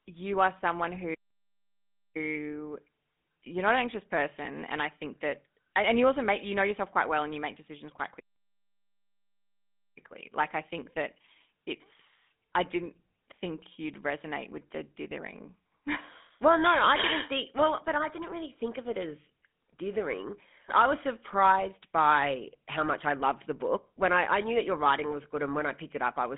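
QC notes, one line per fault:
Throughout, GSM full-rate codec: the speech carries the buzzy, gravelly roughness of this early mobile codec, which models the vocal tract and drives it with a sparse, regularly spaced pulse excitation instead of the true signal. The damage is plainly audible, consistent with a 13 kbps full-rate stream. The line band runs from about 200 Hz to 3.6 kHz, and nothing reaches above 3.8 kHz, leaving the voice narrow and dull.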